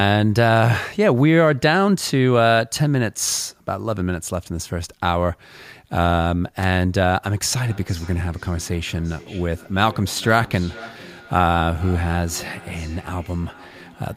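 An electrical switching spike lands at 6.63 s: a sharp snap laid over the speech, far too brief to belong to it. It is likely from a nearby switch, motor or static discharge arcing for an instant, with the audio line picking up the burst.

A feedback echo between two devices runs from 7.58 s to the end. The speech keeps returning at a steady interval of roughly half a second, peaking at about 21 dB below the direct speech. It sounds thinner and more ringing on each pass because another device's speaker re-feeds the microphone, and no echo canceller removes that loop.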